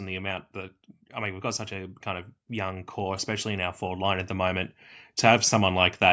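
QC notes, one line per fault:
0.52–6.0 s, automatic gain rising: the level climbs steadily by about 9 dB over more than five seconds, with speech and background swelling together, because the gain control judged the input too quiet and kept raising its gain.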